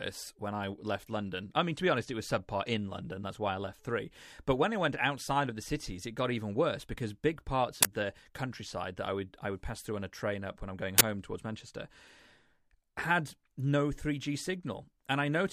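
At 7.83–7.85 s, after "worse because big parts", and 10.98–11.01 s, after "up when I'm going", uninitialised buffers play leftover memory as 23 ms bursts of loud digital noise, fitting 1024-sample blocks. They show as waveform slabs and broadband spectrogram stripes.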